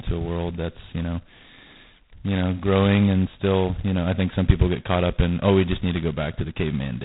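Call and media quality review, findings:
G.726 ADPCM link coding at very low rate, throughout. Each sample carries only a coarse difference from the predicted value, leaving a harsh rasping hiss riding the speech level. Heavy damage points to 16 kbit/s; nothing passes above 3.9 kHz.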